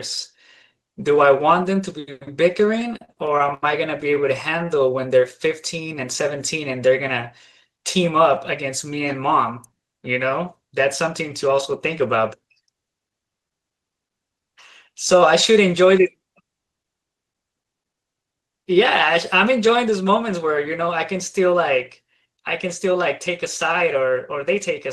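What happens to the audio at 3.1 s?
At 3.1 s the speech is inside repeated stalls (stutter), from 2.79 to 4.18 s. Packets arrive late, so the jitter buffer keeps running empty. Twelve gaps, the longest 80 ms, are filled by stretching the last sound. Nothing is lost, but the speech drags and stutters.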